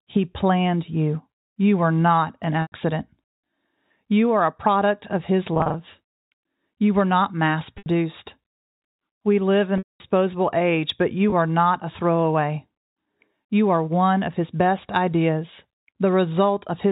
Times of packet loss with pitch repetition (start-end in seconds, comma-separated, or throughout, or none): 2.62-2.72, 5.54-5.74, 7.78-7.86, 9.78-10.00, 11.30-11.32